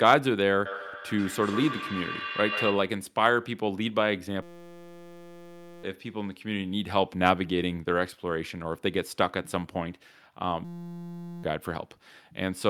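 From 0.65 to 3.08 s there's feedback echo between two devices: another device in the room is playing this talker back, and this microphone picks it up again. The echo canceller only knows about its own loudspeaker, so it lets that copy through. Each syllable comes round again about every 150 ms, thinner and ringier each pass, and at its loudest sits only about 7 dB under the speech itself.

Then at 4.42 to 5.83 s, and again at 10.65 to 11.44 s, you get a system hang loop. The machine stalled while the sound hardware kept cycling one tiny 5.8 ms slice of its ring buffer, which fits a 256-sample buffer. Because the loop is so short it doesn't stutter; it comes out as a flat buzz at 172 Hz. The speech underneath is simply gone, around one and a half seconds in the first stretch and roughly 0.7 s in the second.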